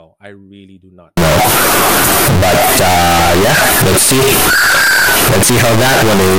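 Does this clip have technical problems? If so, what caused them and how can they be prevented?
Yes. From 1.17 s, just after "I really do not", to the end, the sound becomes a harsh near-square wave, with background noise as loud as the speech, though pitch remains. This is float read as integer, likely 32-bit float samples decoded as 32-bit integers. Unlike ordinary clipping, even quiet moments blare. Prevent it by declaring and reading the same sample format at both ends.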